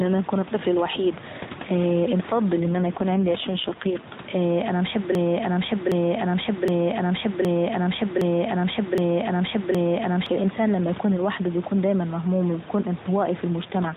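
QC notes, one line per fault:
2.60–4.10 s and 13.62–13.97 s, AMR rate drop: the codec falls from 12.2 to 5.9 kbps, so the voice turns buzzier and more synthetic; unlike packet loss, there is no gap and the bandwidth stays the same.
5.15–10.26 s, broken-record loop: after "انا نحب", a 0.77 s fragment repeats identically seven times before "الانسان لما يكون لوحده", likely from a stalled stream resending its last buffer. It is exact, unlike jitter stutter.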